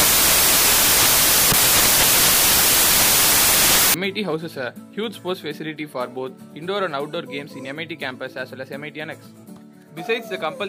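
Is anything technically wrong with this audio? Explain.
Yes. From 0.00 to 3.94 s the samples are built from the wrong bytes. The reader misassembles each sample's bytes, so rapidly changing low bits become the dominant part. The result is loud, harsh broadband noise, close to white on loud sounds.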